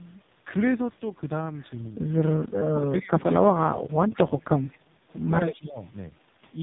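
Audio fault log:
Throughout, AMR narrowband mobile codec: The speech is band-limited to about 3.8 kHz, so sibilants and breath lose their edge. Heavy codec damage gives the voice a buzzy, synthetic quality, as if rebuilt from a few pulses every few milliseconds. That fits AMR-NB at its lowest rate, around 4.75 kbps. On a spectrogram, energy stops at a flat ceiling near 3.8 kHz. Harmonics look smeared and blocky, with framing that repeats every 20 ms.
2.45–4.49 s and 5.46–5.79 s, speech suppressed in double talk: In both stretches the talker's level sags in patches rather than holding steady. About 1.5 s is affected in the first span, dipping by up to roughly 25 dB, and about 0.3 s in the second, dipping by up to roughly 15 dB. The likely cause is an echo canceller that turned the near talker down while the far side spoke too. On the waveform the envelope shows sudden notches. On a spectrogram, those notches appear as faded vertical gaps.
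4.15–4.21 s, 4.71–4.78 s and 5.54–5.60 s, echo leak: Short, faint repeats of the voice trail the original by 191 ms. The first repeat sits about 20 dB below the speech, the second about 30 dB below, and the third about 25 dB below. Each lasts only 60–70 ms. Residual echo from a loudspeaker path that the canceller did not fully remove is the likely source. A spectrogram shows weak ghost copies of the preceding speech patterns, shifted 191 ms later.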